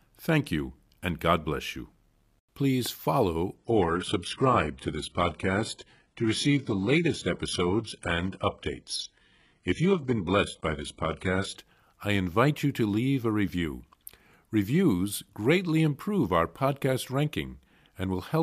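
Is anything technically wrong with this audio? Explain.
Yes. From 3.57 to 11.57 s, starting just before "I invite you to", the adaptive stream drops to a lower bitrate as the connection slows. The speech abruptly loses everything above 11.1 kHz, with no gap, which fits a stream of about 12 kbit/s.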